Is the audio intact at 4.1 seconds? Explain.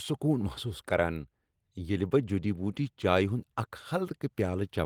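Yes, the speech at 4.1 seconds is intact, with no dropout, click, distortion or other fault at that moment.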